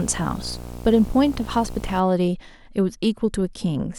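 Right from the start until 2.0 s there's video or display buzz under the speech: a screen or video cable leaking into the audio path, giving a rasping 60 Hz field-rate buzz with hashy grit on top, sitting roughly 15 dB below the speech.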